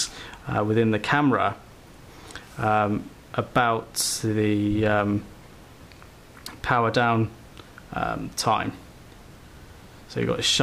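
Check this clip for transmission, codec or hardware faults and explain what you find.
Nothing wrong can be heard anywhere in the recording.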